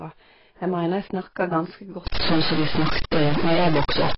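AAC compression runs through the whole recording: the speech sounds dull and smeared, with nothing above 5.5 kHz. This is likely low-bitrate AAC-LC, and the heavy damage fits a rate around 16 kbps. At that rate the encoder has too few bits for each frame of frequency lines, so it drops the top of the spectrum entirely and quantises what remains coarsely against its hearing model, blurring consonants and detail.

A stuck bit starts at 2.07 s and lasts to the end. From that point the speech gains distortion. The likely cause is one data bit held permanently at 0 or 1, perhaps by a faulty line or converter. Every sample whose true value disagrees with that bit is shifted by the bit's weight. Because the error follows the waveform, it turns into distortion that rides on the speech rather than sitting apart from it.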